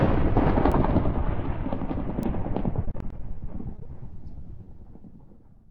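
At 0.72 s and again at 2.23 s, a single sample was corrupted by a bit error spike: one flipped bit threw the value off by a power of two before it snapped back. Each time this produces one sharp, broadband tick that has nothing to do with the surrounding audio.

From 2.85 to 3.21 s and from 3.76 to 3.99 s, repeated packet loss (robotic sound) sets in. Short holes of up to 30 ms arrive in quick succession and are patched by extending the last sound, with roughly 30% of each stretch concealed. The result is choppy, with fragments missing.

At 4.64 to 4.68 s, a short concealed packet loss leaves about 20 ms that never reached the decoder. The gap was bridged by continuing the preceding sound and blending back into the real signal, which is heard as a brief smear.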